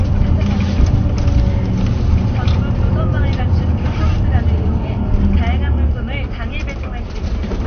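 Throughout, the sound is dull and gurgling, with nothing above 6.5 kHz: likely MP2 compression at a low bitrate, around 48 kbps, switching off upper sub-bands.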